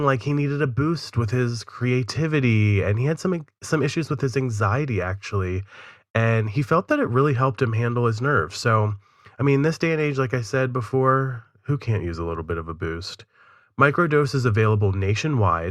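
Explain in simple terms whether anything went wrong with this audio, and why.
Nothing went wrong; the recording sounds as it should.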